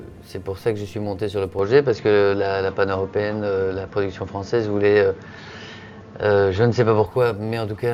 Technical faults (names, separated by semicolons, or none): input switched to a poorer device